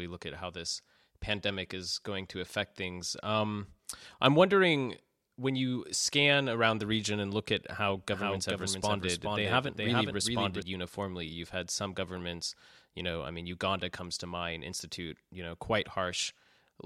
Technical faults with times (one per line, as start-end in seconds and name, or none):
8.12-10.62 doubled audio track